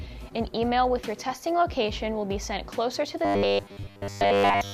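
From 3.25 s to 4.73 s the audio takes on a robotic sound from repeated short buffers, likely caused by input arriving too slowly. A segment of about 10 ms is replayed in place of most of the real signal, roughly 70 percent, imposing a fixed 100 Hz metallic buzz.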